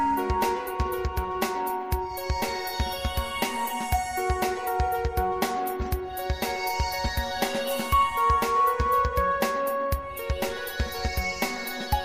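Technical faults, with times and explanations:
No technical faults can be heard anywhere in the clip. Nothing in the audio calls for a timed entry or an explanation.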